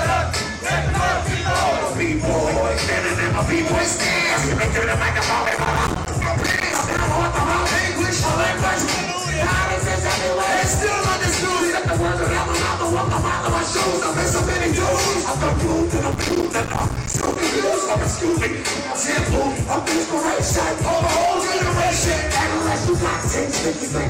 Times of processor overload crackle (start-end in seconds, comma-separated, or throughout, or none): 5.46-7.00, 16.12-17.36